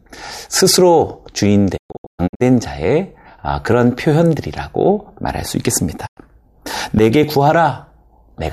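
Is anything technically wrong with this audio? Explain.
Yes, there's digital broadcast dropout, twice. From 1.76 to 2.42 s the speech breaks into several short holes totalling 432 ms, the longest 120 ms. At 6.05 s there's a single 96 ms gap. The receiver lost good frames and muted with quick 20 ms fades, so that audio is simply gone.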